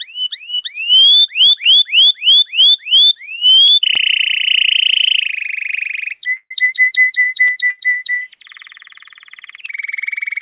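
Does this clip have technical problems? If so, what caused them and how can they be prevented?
Yes. Short concealed packet loss occurs at 1.64 to 1.67 s and 3.67 to 3.71 s. Each time about 20 ms of audio failed to arrive in time, and the decoder extended the preceding sound to cover the gap before rejoining the real signal, leaving a brief smear or wobble. A larger jitter buffer, a more stable network path or forward error correction would prevent it.

Electrical switching spikes appear at 3.95 s and 7.48 s as sharp snaps sitting on top of the sound. They are likely arcs from a nearby switch, motor or static discharge that were picked up by the audio wiring. Shielded, properly grounded cables and keeping switching equipment away from the line would prevent them.

Bursts of packet loss occur at 6.37 to 6.52 s and 7.70 to 7.79 s, removing about 140 ms and 80 ms of audio. The receiver stretched the last sound and let it fade, with about 60 ms falling to silence in the first gap, then resumed later with the intervening material gone. 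Prioritising the call traffic, avoiding congested or wireless links, and adding redundancy would prevent this.

The sound is band-limited with nothing above 4 kHz, which fits a G.711 narrowband call path.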